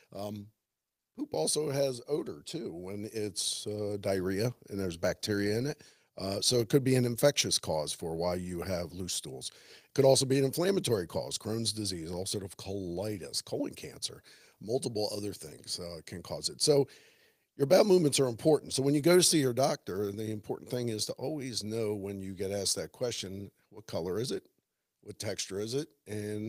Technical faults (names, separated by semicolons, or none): automatic gain rising